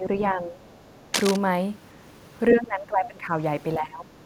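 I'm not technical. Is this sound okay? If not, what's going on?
No, there are three kinds of trouble here.

Speech suppressed in double talk, from 0 to 0.58 s, 2.53 to 3.32 s and 3.78 to 4.11 s. This is likely a call-style echo canceller that got confused while both people talked at once. It couldn't tell this speaker from the sound of the other person on the loudspeaker, so it turned everything down. The voice dips. The first dip is mild, and the two later ones are deeper.

Other side's voice leaking through, from 0.63 to 0.77 s. Here the same echo canceller likely failed to fully remove the other person's voice, which was playing from this speaker's loudspeaker and being picked up again by the microphone. The result is a brief, very faint scrap of a second voice underneath.

Cable scratch noise, from 1.14 to 1.36 s. This is likely a worn cable, plug or control being moved, so its electrical contact changed very quickly. 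That adds a rough, uneven burst of scratching or rustling, nearly as loud as the voice itself, lasting about a fifth of a second.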